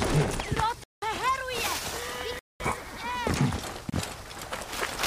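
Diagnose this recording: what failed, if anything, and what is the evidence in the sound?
The driver or buffer stage failed to deliver audio in time, so the output carried blocks of digital silence. The sound drops abruptly to silence and returns with no fade: a hole of about 186 ms from 0.84 to 1.02 s, about 210 ms from 2.39 to 2.60 s, and a brief 27 ms gap at 3.90 s. The first gap's length fits an 8192-sample buffer going unfilled.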